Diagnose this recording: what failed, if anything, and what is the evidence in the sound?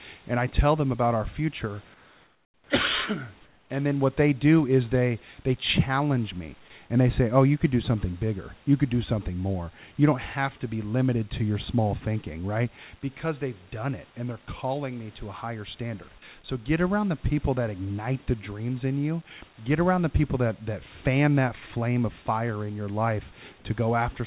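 At 1.94–2.7 s and 3.46–3.7 s, background goes flat, featureless, about 6 dB quieter: comfort noise in place of the background, likely call-side discontinuous transmission.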